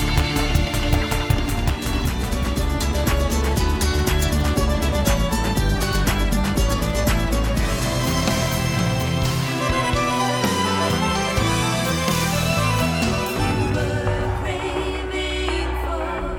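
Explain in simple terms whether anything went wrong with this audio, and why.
Nothing went wrong; no faults can be heard.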